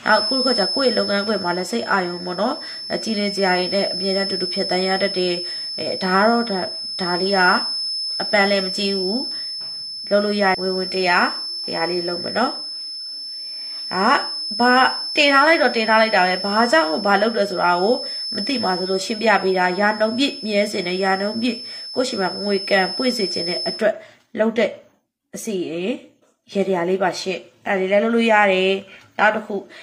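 From the start until about 23.86 s, a thin, steady whistle near 5.3 kHz runs behind the sound, roughly 10 dB below it and swelling and fading slowly in level before it stops. This is a feedback whistle, likely caused by the loudspeaker-to-microphone loop sitting right at the threshold of feedback. At that point a single high frequency keeps recirculating and sustains itself without building into a runaway howl.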